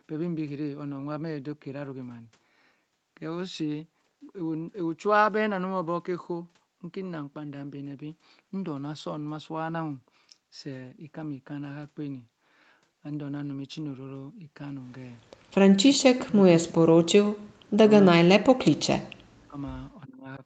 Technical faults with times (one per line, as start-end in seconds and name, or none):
15.92-17.85 speech suppressed in double talk
18.35-19.59 speech suppressed in double talk
20.06-20.43 speech suppressed in double talk